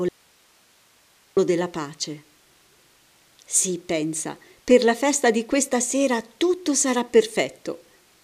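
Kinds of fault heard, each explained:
Audio dropout to a faint residue: From 0.09 s to 1.37 s the speech is lost for about 1.3 s, leaving only hiss roughly 35 dB below the normal level. The break is most likely in the signal upstream, with the downstream path still live and passing its own noise. Unlike a natural pause or a fade, the speech cuts off and returns abruptly, and the gap holds steady hiss rather than true silence.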